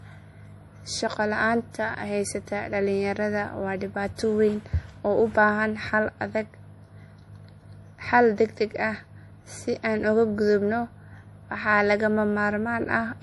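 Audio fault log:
Throughout, MP3 compression: the speech has a plainly audible watery, swirling quality, with metallic chirps on s sounds and softened consonant attacks, and nothing reaches above 11.5 kHz. The likely cause is an MP3 encoder starved of bits, which fits a low rate around 48 kbps. It cuts the treble at a fixed point and drops weaker frequency lines that flicker on and off between frames, producing the swirl and smearing the attacks.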